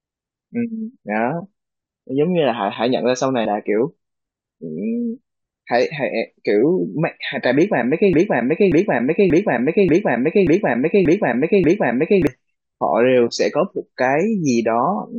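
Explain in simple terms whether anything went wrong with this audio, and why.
From 8.13 s to 12.27 s the speech gets stuck: the same short snippet, a little over half a second long (0.58 s), plays again and again, seven times in a row, like a skipping record. This is a broken-record loop. The likely cause is that the player or stream stalled and kept repeating the last piece of audio it had. Whatever was said during those four seconds is lost.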